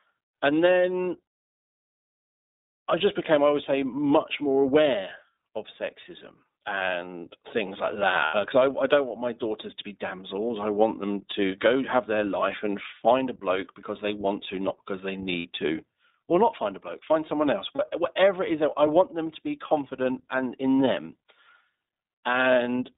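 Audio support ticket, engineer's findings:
iLBC codec, whole clip. Speech band-limited to roughly 200 Hz–3.7 kHz, nothing above. Rough, slightly synthetic texture on all speech; codec damage plainly audible. Probable component: narrowband VoIP codec, iLBC. Fits the 13.33 kbps mode with 30 ms frames. Mechanism: each frame's excitation coded standalone at low rate, so fine detail is lost and a coarse, buzzy grain is left.

Lost iLBC frames, 8.25–8.35 s. 90 ms held, buzzy vowel-like sound, fits three frames lost. Decoder repeated last pitch cycle mixed with noise. Clean recovery right after.

Lost iLBC frames, 15.39–15.46 s. Same symptom, 60 ms, fits two frames. Same concealment.

Lost iLBC frames, 17.75–17.80 s. Brief 30 ms smear, one frame. Standalone frames, so no lingering damage.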